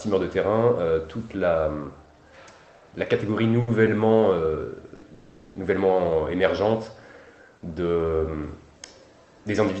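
The audio came through a call path whose top end stops near 8 kHz, consistent with Opus at roughly 24 kbps, and it has two kinds of jitter-buffer fault. There are two short stalls from late packets, at 3.61–3.70 s and 4.95–5.05 s. At each, a sound is held for about 60 ms and then 70 ms, with a slight buzz or dip, until the packet arrives and playback resumes from the same point, so nothing is lost. Right after, from 5.14 to 5.58 s, comes a call audio freeze. The last sound is stretched for about 410 ms into a fading buzz or hiss that never reaches silence. This is likely from packets held up in transit draining the buffer. It differs from the short stalls by its length and audible decay, not by any missing audio.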